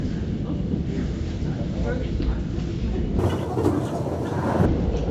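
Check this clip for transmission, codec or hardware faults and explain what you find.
One fault stands out. From 3.19 to 4.66 s the sound jumps a full octave (12 semitones) and runs at twice its normal speed, hurried and thin. This is a wrong sample rate: the samples were played with no conversion at double the rate they were captured at, which fits 16 kHz material played at 32 kHz.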